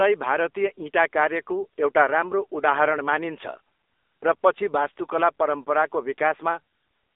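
From the very start to the end, the speech runs through the AMR narrowband mobile codec, the old phone-network speech coder. Everything lives between about 300 Hz and 3.7 kHz, with nothing at all above 3.8 kHz, so it sounds thin and boxed in. The codec damage is plainly audible: a buzzy, synthetic edge as the vocal-tract model rebuilds each frame from a few pulses, which fits one of its lower modes, somewhere near 8 kbps.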